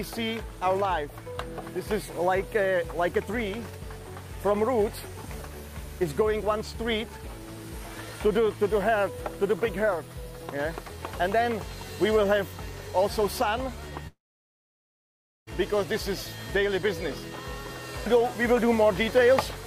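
From 14.07 s to 15.49 s the audio breaks off. The last sound is briefly stretched into a fading buzz, then about 1.31 s of silence follows, and the sound resumes with roughly 1.4 s missing. This is likely a long network dropout, with the receiver concealing the gap.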